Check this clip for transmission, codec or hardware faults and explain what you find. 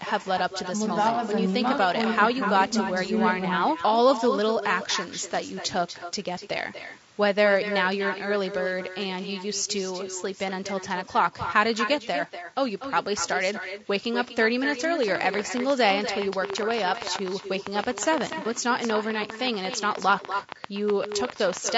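Four faults are audible: an echo running through the whole clip, codec roughness also present throughout, one brief dropout, and a burst of clicking near the end.

Echo with no canceller runs from start to finish. The far end is playing the call through a loudspeaker, its microphone picks that up, and nothing removes it before it returns. Every phrase is shadowed by a copy delayed by around a fifth of a second and sitting about 9 dB below the direct speech. That copy sounds thinner.

Low-delay AAC compression colours the whole clip. The likely cause is an AAC-ELD encoder running at a low rate, with a bit budget that fits roughly 32 kbps. With too few bits to code the voice's harmonics cleanly, noise fills the gaps between them and the top band sounds partly synthetic. The damage is plainly audible: the speech has a rough, grainy texture throughout.

AAC frame loss with concealment occurs from 5.99 to 6.04 s. 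About 30 ms of audio went missing, consistent with a single lost frame. The decoder patched the gap by extrapolating from the last good spectrum rather than leaving silence. The result is a brief smeared, noisy blip where the speech loses its definition for an instant and then recovers.

A train of clicks runs from 15.03 to 21.70 s. Something in the chain, probably electrical interference or a faulty connection, injects short pulses of near-identical shape. They arrive unevenly at about 9 per second, roughly 70 in all, peaking some 15 dB above the speech. They are heard as a ragged ticking laid over the voice, clearly present in the pauses as well.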